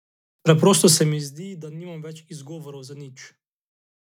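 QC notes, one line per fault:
Nothing stood out on listening to this speech clip.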